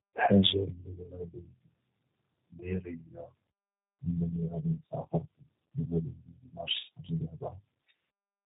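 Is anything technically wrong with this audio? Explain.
Yes. Throughout, the speech sounds rough, muffled and warbly, with nothing above 3.8 kHz. This is tandem speech coding: two speech codecs in a row, consistent with AMR-NB recoded as G.729A.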